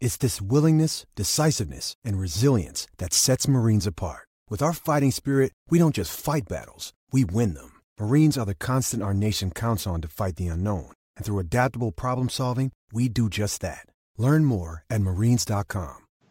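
No technical faults can be heard anywhere here.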